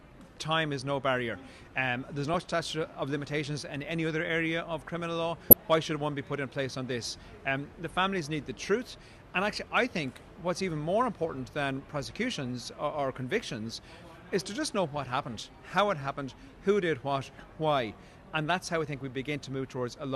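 From 2.34 to 2.45 s, the sound breaks into DAB burbling. Weak reception lets bit errors slip past the error correction into the MP2 data. Corrupted samples put short blips of noise in single sub-bands, and corrupted scale factors make sub-bands leap in level for up to a frame. The result is a burst of bubbling, watery blips. It returns briefly from 5.50 to 5.53 s. Both bursts point to a handful of damaged frames, from an error rate of a small fraction of a percent.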